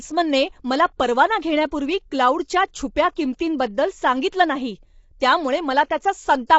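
Throughout the speech, plainly audible rough, grainy texture fills the gaps between pitch harmonics, and nothing reaches above 7.7 kHz. This is likely low-delay AAC compression, AAC-ELD at a rate fitting 24 kbps. Unlike a simple low-pass filter, coarse quantization at the low bitrate adds noise between the harmonics.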